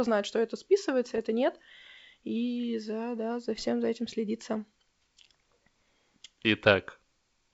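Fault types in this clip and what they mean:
Bit errors on an ADPCM link: Two short bursts of pops and rough, gritty crackle with brief jumps in level, from 1.06 to 1.20 s just after "знает что это" and from 3.53 to 3.65 s between "за да за" and "за этим следится". Flipped bits, at a rate of roughly a fifth of a percent, corrupt the G.722 stream. Each error also throws the decoder's step size and predictor off, so the damage rings on for several milliseconds.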